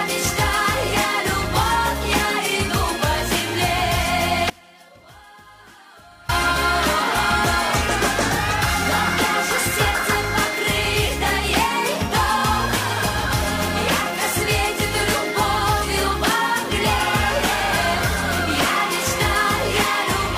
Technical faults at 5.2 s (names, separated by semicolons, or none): audio dropout to a faint residue